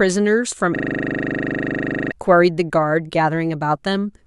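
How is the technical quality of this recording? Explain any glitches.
The recording has one serious glitch. From 0.76 to 2.12 s, a system hang loop repeats a 40 ms buffer 34 times, a 25 Hz buzz erasing about a second and a half of speech. On a waveform, identical blocks tile; spectrograms show harmonic lines every 25 Hz.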